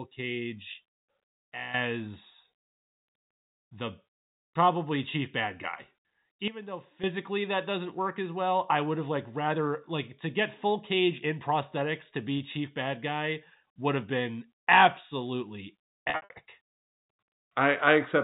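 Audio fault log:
6.48–7.04 s, sudden gain jump: the likely cause is a gain setting applied without a ramp, so the speech and background noise drop together by about 13 dB, then return.
12.38–12.40 s, packet loss with pitch repetition: a 20 ms gap, consistent with one lost packet, was bridged by repeating the last pitch period, giving a brief held, buzzy sound.
16.1–16.3 s, packet loss with pitch repetition: about 160 ms of losses scattered over 200 ms, longest run 60 ms, were concealed by pitch repetition, leaving buzzy stretches that fade and cross-fade back.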